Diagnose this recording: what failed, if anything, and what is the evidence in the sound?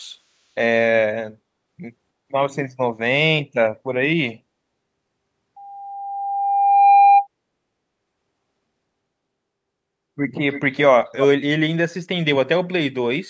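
Acoustic loudspeaker feedback closed the loop between speaker and microphone: an 801 Hz squeal swells over about one and a half seconds from 5.56 to 7.27 s, roughly 10 dB above the speech.

Echo leak, likely from an incomplete far-end echo canceller in call processing: from 10.52 to 10.78 s a faint copy of the speech returns 317 ms late, about 15 dB down.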